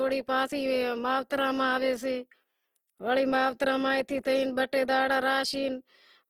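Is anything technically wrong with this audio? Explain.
Yes. Throughout the clip, the speech carries plainly audible damage from what is likely Opus compression, at a rate so low that the encoder runs short of bits for each band. Its music mode keeps every band's energy but fills the starved bands by folding lower ones or with noise, so detail turns grainy, rough and noisy rather than swirling. The band stays wide, up to about 20.2 kHz, which fits a fullband stream at around 16 kbps.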